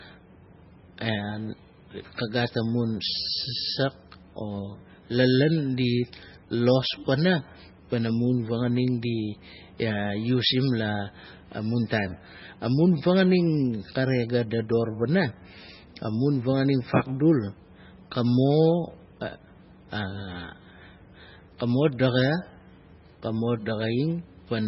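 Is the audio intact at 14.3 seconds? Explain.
No, at 14.3 seconds the speech is still under the heavy damage that runs through the whole clip, likely MP3 compression. Nothing comes through above 5.6 kHz, and the thin, watery swirl of weak frequency lines dropping in and out fits a very low bitrate of around 16 kbps.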